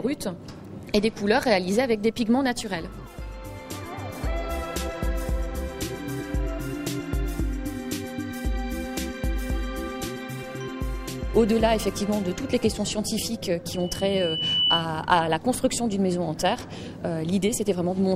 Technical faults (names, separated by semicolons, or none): loudspeaker feedback squeal